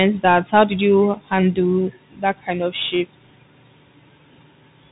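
From start to finish the speech carries Bluetooth CVSD headset codec damage, and it is plainly audible. The signal is cut off sharply above 3.8 kHz, so everything sounds boxed in. CVSD sends one bit per sample, up or down, with an adapting step size, which fits a 64 kbps stream. Loud high-frequency sounds outpace that step and distort, s sounds come out scratchy, and a granular hiss sits beneath the speech.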